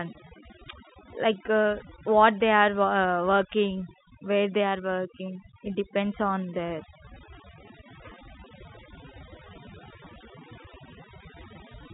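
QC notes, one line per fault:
Throughout: overdone noise removal. Noise reduction pushed too hard has cut individual frequency bands far down or out whenever they came close to the estimated noise floor, and the quieter parts of the speech were taken along with them. The background drops to near silence scattered with twinkling specks. On a spectrogram the gaps between phrases look almost black, with isolated bright flecks, and the harmonics are patchy and eroded at their weaker edges. All of this sits inside a telephone band that stops near 3.8 kHz, which fits G.711 coding passing the audio normally.
10.64–11.44 s: CD scratch ticks. Five short ticks arrive at a regular interval over this stretch, at roughly six a second. That fits a scratch that corrupts more data than error correction can rebuild, once per disc revolution, so the player fills in or mutes the damaged samples. Each tick lasts no more than about 2 ms. 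On the waveform they appear as tiny spikes or brief notches at an even spacing. On a spectrogram they show as thin vertical broadband lines.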